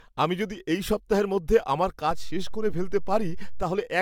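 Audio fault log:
throughout: generation loss. The speech sounds swirly, smeared and hollow, with blurred attacks and nothing above 17 kHz. This likely comes from around five successive AAC-LC encode passes at 96 kbit/s, each requantising on a shifted frame grid so noise and spectral holes compound.
2.11–3.63 s: DC step. Just after "এই সপ্তাহের মধ্যে আমার", the waveform's zero line jumps to an offset, giving a low thump, and the offset ends at 3.63 s. The speech carries on unchanged throughout the shifted interval.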